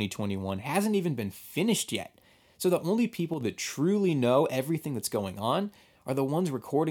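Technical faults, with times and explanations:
3.34–3.41 s, one channel drops out: after "the only", the level falls abruptly by about 6 dB for 73 ms, recovering before "that truly know everything". The likely cause is one stereo channel lost before the mono sum. The waveform shows a sudden amplitude step, and the spectrogram shows a uniformly darker vertical band.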